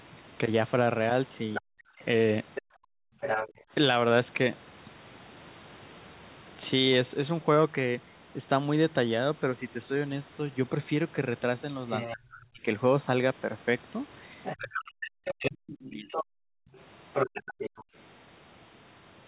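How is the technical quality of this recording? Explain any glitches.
The recording has three kinds of echo-canceller fault, clustered around 2 s and from 12 s to the end. The whole clip is band-limited to 4 kHz, which points to a narrowband call codec such as G.711 A-law.

Other side's voice leaking through, 1.54 to 3.52 s and 11.9 s to the end. A second voice sits under the speech, a few decibels below it in the first stretch and around 10 dB below in the second. The likely cause is a loudspeaker playing the far end into the microphone, with the echo canceller failing to subtract all of it. The residue comes through alongside the talker rather than replacing them.

Speech suppressed in double talk, 1.58 to 2.03 s and 12.13 to 16.23 s. While both voices overlap, the talker's speech drops out in pieces, by as much as around 40 dB. That adds up to about a fifth of a second in the first span and roughly two seconds in the second. 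This is likely the canceller being unable to separate its own talker from the echo, so it turned everything down together.

Background gated by the echo canceller, 2.62 to 3.72 s and 16.42 to 17.95 s. The room sound falls away by about 40 dB, for roughly 700 ms in total in the first span and 400 ms in the second. It then returns. The canceller clamped the microphone hard while the loudspeaker was active and released it afterwards, so the background seems to switch off and back on.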